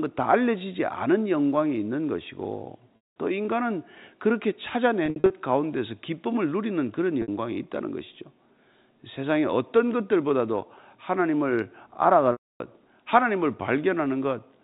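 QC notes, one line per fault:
2.96–3.15, 5.06–5.30, 7.22–7.28, 12.32–12.60 s: packet loss with pitch repetition. Losses of 200, 160 (scattered), 60 and 280 ms are bridged by a repeated pitch period that fades out, heard as a held buzz, the longer gaps fading into silence before speech returns with a short cross-fade. On the spectrogram this shows as frozen, evenly spaced harmonic stripes; on the waveform, identical cycles that decay.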